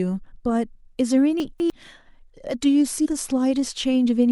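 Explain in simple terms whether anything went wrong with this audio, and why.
Two things go wrong in this speech clip.

Between 1.4 and 1.7 seconds there are chunks out of order. One 100 ms piece of sound arrives late and plays two pieces after where it belongs. Nothing is missing, but the order is scrambled. You hear a brief jumbled moment.

At 3.04 to 3.07 seconds there is damaged data in a compressed stream. A small stretch of the stored sound is corrupted. The player misreads it and briefly loses its place. This comes out as a short chirp or blip.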